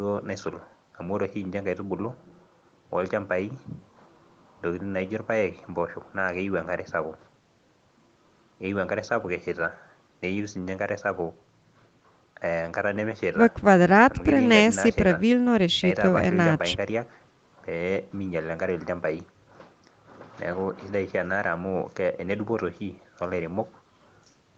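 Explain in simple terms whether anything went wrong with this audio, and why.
Nothing went wrong here: the speech simply sounds like it came over an ordinary online call, with the microphone processing trimming the deepest rumble and the call's encoding leaving nothing above about 8 kHz, which is just how calls normally sound rather than a problem.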